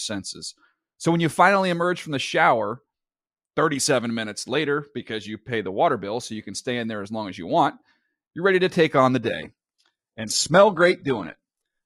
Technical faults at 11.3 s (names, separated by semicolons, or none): adaptive stream at a lower bitrate